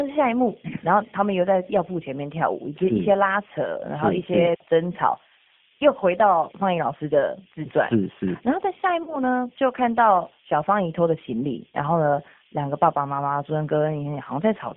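Speech carried through the G.729 codec for the whole clip. The band is held between about 150 Hz and 3.5 kHz, and the coding roughness is plainly audible. The sound is rough and slightly synthetic, which points to G.729A at 8 kbit/s. Packet loss concealed by the speech codec occurs at 9.03–9.19 s and 11.70–11.77 s. In each case 40 ms of audio is missing, which fits two lost packets. The decoder extends its last pitch and filter with falling gain, so the sound is stretched into a buzzy tone or a coloured noise that fades. It stays weak briefly after packets return.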